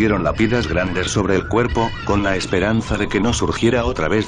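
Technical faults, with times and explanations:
Nothing technical stands out here; the audio sounds fine all the way along.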